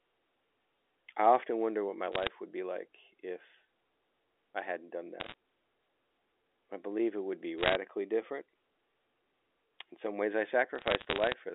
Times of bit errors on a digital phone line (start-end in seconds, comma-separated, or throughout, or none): 2.12-2.30, 5.20-5.34, 7.58-7.75, 10.76-11.34